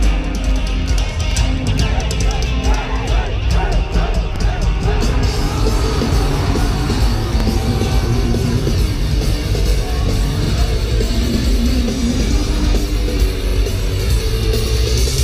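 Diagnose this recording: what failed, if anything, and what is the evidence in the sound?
Overlapping chunks at the buffer or chunking stage: a 44 ms piece repeats at 1.32, 4.36, 7.40 and 13.49 s, heard as a click or stutter. Each 3-second chunk starts before the previous one ends. The waveform shows a duplicated segment and a step at each join; a spectrogram shows a thin vertical broadband line there.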